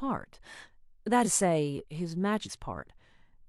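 At 1.21 s and 2.42 s, compressed frames are skipped. Roughly 0.2 s, then 0.3 s, of speech vanishes. Each jump drops whole 46 ms codec frames.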